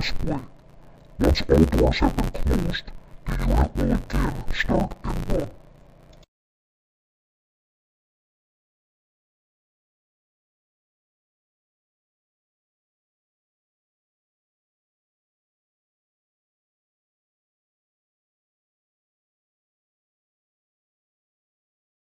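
Interleaved audio read as planar throughout: 10.88 ms blocks split into halves make the sound dull and robotic, buzzing at 91.9 Hz, with evenly spaced spectrogram bands and regularly spaced block boundaries in the waveform.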